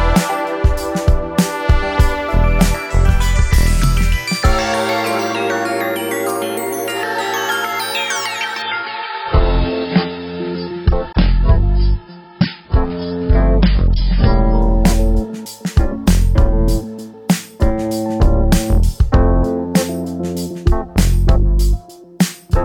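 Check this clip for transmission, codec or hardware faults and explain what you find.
One fault stands out. From 8.62 to 14.62 s the audio turns dull, with nothing above 5.5 kHz and smeared codec artefacts, then snaps back cleanly with no gap. This is an adaptive stream at a lower bitrate: a slowed connection forced a leaner encoding, consistent with AAC dropping from roughly 96 to 16 kbit/s.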